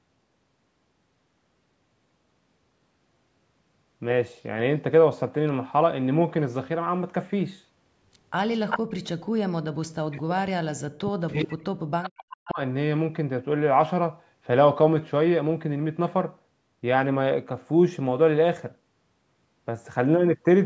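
From 8.54 to 8.79 s a delayed copy of the speech trails the talker by about 391 ms, only a few decibels quieter than the direct sound. This is an echo leak, likely from a far-end loudspeaker whose echo canceller let part of its microphone pickup return down the line. On a spectrogram the harmonic pattern of the earlier syllables reappears, shifted right by roughly 0.4 s. In the waveform, a second envelope overlaps the first.

Right after, from 9.63 to 10.41 s and again from 10.79 to 12.59 s, the speech is pushed down by as much as roughly 40 dB, in chunks totalling under a second and about two seconds. This is speech suppressed in double talk. The likely cause is that both sides spoke at once and the echo canceller, unable to separate the talker from loudspeaker echo, attenuated everything. On a spectrogram the energy fades to near-empty columns, with the upper harmonics (the call path carries nothing above 8 kHz) vanishing first. 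The waveform shows abrupt, choppy collapses in amplitude.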